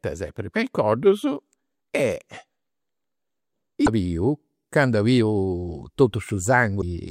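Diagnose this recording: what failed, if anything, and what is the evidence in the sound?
The failure is at the codec stage: damaged data in a compressed stream. You can hear two short glitchy bursts in the speech, one from 3.83 to 3.88 s and another from 6.78 to 6.83 s, each about 50 ms long. Corrupted bytes in those spots threw off the decoder, so it misread what it got, lost its place, and hunted for the next valid frame header before the audio picked up again.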